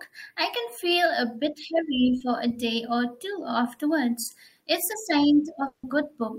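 At 2.19 s and 4.23 s, short concealed packet loss: about 10 ms failed to arrive and was patched from the preceding sound, leaving a brief smear rather than any gap. From 5.67 to 5.84 s comes a fading 160 ms extended buzz or hiss with no silence after it, most likely a long network dropout concealed entirely by continuation.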